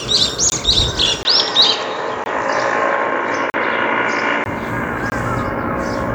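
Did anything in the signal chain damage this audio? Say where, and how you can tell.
Yes. There are hard dropouts at 0.5, 2.24, 3.5 and 5.1 s, each a 20 ms block of digital silence (40 ms at 3.5 s). That's the driver or buffer not being filled in time.

From 1.23 to 4.46 s the sound goes dull, with nothing above 7.4 kHz, a level shift of a few dB, a faint new noise floor, and a 20 ms gap at the switch. This is likely the input switched to a poorer device.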